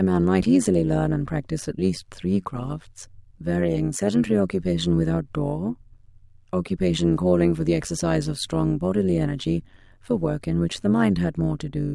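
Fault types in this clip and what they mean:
Overlap-add ripple: the speech was chopped into windowed frames and stitched back with an overlap that doesn't sum to a steady gain, so the level dips and swells by about 11 dB roughly a hundred times a second, giving a rough, buzzy robotic flutter throughout.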